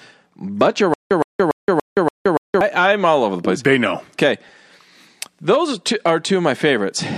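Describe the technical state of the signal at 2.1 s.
Playback likely stalled and replayed its last fragment, so 0.94 to 2.61 s is stutter with silent gaps: a 116 ms burst repeats six times every 287 ms, with 171 ms of digital silence between.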